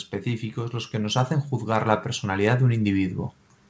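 Speech whose level, together with the background behind it, swells steadily upward from 0.24 s to 3.19 s, ending about 6 dB louder. This is automatic gain rising: the call's gain control judged the input too quiet and raised its gain gradually, lifting everything at once. The sound stops at 8 kHz, which fits a wideband call codec such as G.722.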